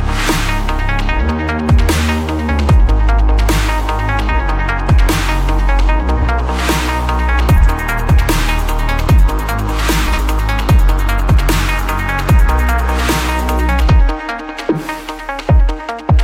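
The audio has three short frames-out-of-order faults, at 6.17–6.27 s, 7.56–7.67 s and 10.06–10.18 s. Each is a garbled flutter of roughly a tenth of a second. Two adjacent blocks of about 46.4 ms arrive swapped and are decoded in that order, which points to a single frame per block. The stretch plays with its halves exchanged, so no time is lost.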